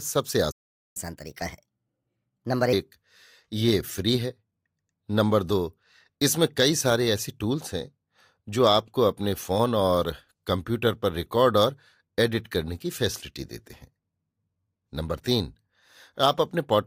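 Half a second into this speech recording the audio just drops out: there's a playback stall from 0.51 to 0.97 s, about 440 ms of dead silence in mid-flow. The most likely cause is the player running dry of buffered data, or its audio thread getting blocked, so nothing reached the output until it recovered. When the sound comes back it picks up where it left off, and that's where the second problem starts. From 0.97 to 2.73 s you get catch-up at higher speed. The player is working through the backlog by resampling it, so everything runs at 1.25 times normal speed and the pitch rides up by roughly four semitones, giving that brief chipmunk lift. Once the lost time is made up, around 2.73 s, speed and pitch settle back to normal.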